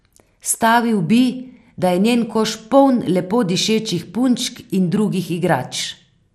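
Throughout, the speech sounds dull and gurgling, likely from MP2 compression at around 80 kbps; a spectrogram shows a hard ceiling at 14.9 kHz.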